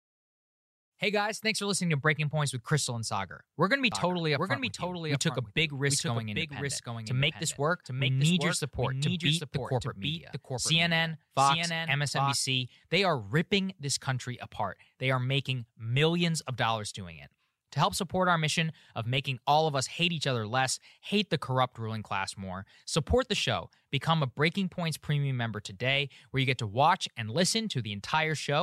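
From 3.92 s to 12.36 s the speech carries a doubled audio track: a second full-band copy of the same material runs roughly 0.7 s behind the original, around 5 dB quieter. It has no reverberant tail or room colouring, and it cuts in and out abruptly at those boundaries. The likely cause is the signal being captured a second time through a slower path, or an edit that left two copies out of alignment.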